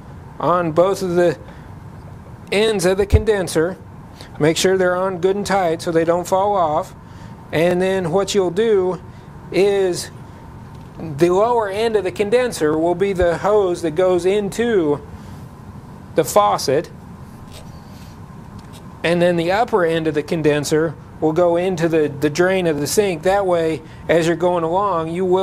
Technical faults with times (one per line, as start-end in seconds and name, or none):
2.68-2.71 overlapping chunks
7.71-7.73 overlapping chunks
12.73-12.76 overlapping chunks
22.78-22.81 overlapping chunks